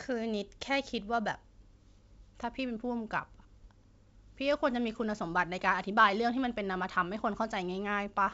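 No technical faults can be heard in the speech, which has the bandwidth of G.722 wideband telephone coding, reaching up to about 7 kHz with at most faint coding damage, consistent with the codec running at its full 64 kbit/s rate.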